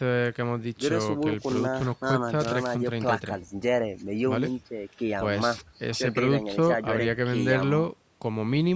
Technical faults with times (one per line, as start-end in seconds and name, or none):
none